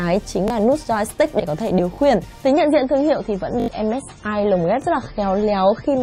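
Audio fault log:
0.48 s, 1.96 s, 3.60–3.68 s, 4.82 s: repeated buffer. The device replays the previous block when fresh audio arrives late, which fits a 20 ms buffer. The single repeats give brief clicks, while 3.60 s loops four extra times into a short stutter, dropping about 70 ms.
2.47–6.02 s: adaptive stream at a lower bitrate. The quality changes suddenly with no gap as the stream switches down, consistent with MP3 falling from 128 to 24 kbit/s. Nothing above 10.5 kHz survives, so the treble goes dull and coding artefacts rise.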